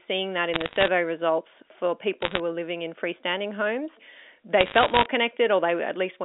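Bit errors on a digital phone line crackle through the speech at 0.54 to 0.88 s (just before "results for"), 2.22 to 2.40 s (right before "were living in freestanding") and 4.6 to 5.06 s. Roughly one bit in a hundred gets flipped in the telephone stream, each flip knocking one sample off, so the speech underneath stays intact but picks up sharp ticks.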